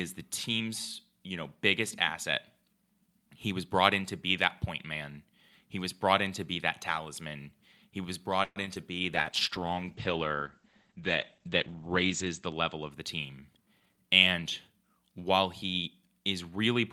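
At 8.43 s, right after "that talisman he was", the speech stops advancing for about 0.14 s. The last sound is stretched into a fading buzz or hiss for about 125 ms and ends in roughly 30 ms of silence before the speech resumes where it left off, with nothing lost. This is a call audio freeze. The likely cause is packets held up in transit until the jitter buffer ran dry, adding about 125 ms of delay.

Close behind come two instances of short concealed packet loss, at 8.66 to 8.69 s and 8.75 to 8.78 s. In each, about 20 ms of audio never arrived. The receiver papered over the hole with a brief synthetic continuation before blending back into real audio. Each is heard as a small smear or wobble, and a quick consonant in either spot can drop out.

From 9.15 s to 12.97 s there is a call bitrate drop. The encoder's rate falls from 64 kbps to 11 kbps, spending about 3.1 s at the bottom, and the coded bandwidth shrinks from 20 kHz to 8 kHz. 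The speech turns muffled as the top end disappears and rough and watery from the coarse coding, then regains clarity as the rate climbs back.

Between 13.32 s and 13.97 s comes a jitter buffer speed-up. Having built up excess audio, the receiver trims short pitch-period-sized pieces in quick succession, removing roughly a tenth of a second in total. Playback runs at about 114% speed with the pitch unchanged, so the speech sounds hurried over that stretch.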